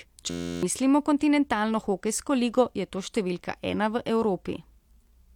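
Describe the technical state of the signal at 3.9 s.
At 3.9 s the speech signal is intact, with no dropout, clipping, distortion or other audible fault at that point.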